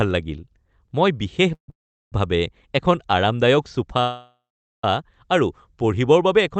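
A speech recording carried over a call path, with three call audio freezes. The sound stops at 1.54 s for 0.14 s, again at 1.70 s for 0.42 s, and at 4.01 s for 0.82 s. Each one begins with a fading buzz or hiss, then goes silent. The speech then resumes where it stopped, with nothing lost, only delayed. The likely cause is packets held up in transit, draining the jitter buffer. The audio is also band-limited to about 8 kHz, which fits the Opus codec.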